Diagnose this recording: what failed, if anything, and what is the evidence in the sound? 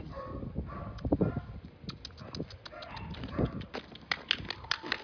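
Nothing in the chain failed: no stage from wiring and conversion through buffering, processing, network, storage or playback leaves any audible trace here.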